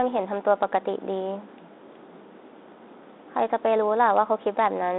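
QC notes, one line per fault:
No faults to note, so there is no line per fault.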